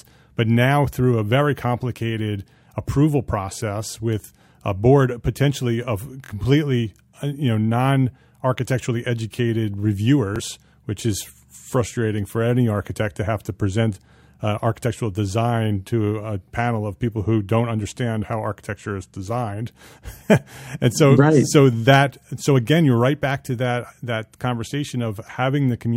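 Speech with Bluetooth stutter at 6.25–6.31 s and 10.36–10.40 s. Lost or late packets made the receiver replay its last slice, skipping about 46 ms and 23 ms (consistent with two and one 23 ms frames). Unlike a dropout, it repeats a slice instead of going silent, then resumes further on.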